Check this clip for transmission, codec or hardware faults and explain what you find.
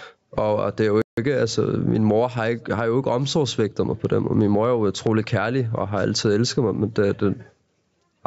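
Two faults stand out in the speech: gain pumping throughout and a brief playback stall near the start. The call's microphone processing trims the lowest bass, which is expected on a call.

Gain pumping runs through the whole clip. The input gain was likely set far too high, so a fast limiter clamps down on every loud syllable. The level swings by about 20 dB, making the speech sound flattened and squashed.

A playback stall hits from 1.02 to 1.17 s, right after "og det er jo". The player likely ran short of data or its thread was held up, so output stopped for about 157 ms. The speech cuts out mid-flow and resumes after the gap.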